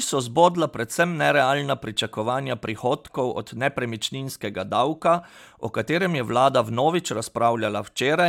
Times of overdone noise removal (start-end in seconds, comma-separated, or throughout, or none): none